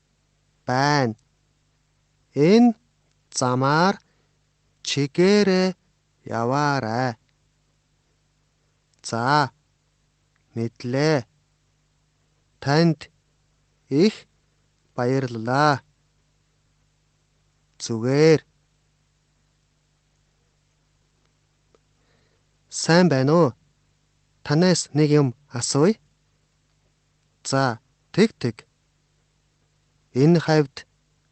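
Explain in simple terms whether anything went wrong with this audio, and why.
Nothing went wrong: the audio passed through an ordinary internet call link using the Opus codec, which by design trims content above 8 kHz, and nothing else turned up.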